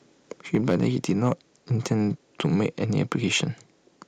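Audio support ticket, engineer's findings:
Microphone overload, 0.54–1.33 s, 1.91–1.93 s, 2.44–2.66 s. Harsh, crackling edge on the loudest peaks, flattened tops. Likely capture gain set too high, driving the converter about 5 dB past full scale in the first span and about 2 dB in the later two, with a small share of samples clipped.

Microphone volume stepped down, 0.55 s. Abrupt level drop of about 2 dB across sound and background, just after the first distorted peak. Likely the call software's automatic gain control reacting to the overload and lowering device input volume in a single step.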